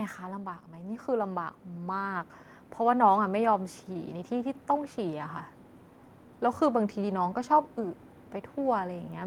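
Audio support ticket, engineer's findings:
Automatic gain falling, 0.05 to 0.73 s. Level starts hot, then sags by about 3 dB, with speech and background dropping together. AGC stage judged the input too loud and pulled its gain down gradually.

Automatic gain rising, 0.67 to 4.18 s. Slow swell of about 6 dB over roughly 3.5 s, with speech and noise floor rising in step. Same AGC stage reversing and judging the input too quiet.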